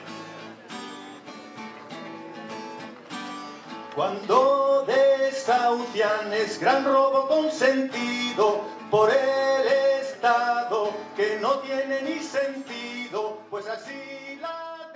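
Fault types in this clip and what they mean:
No audible technical faults.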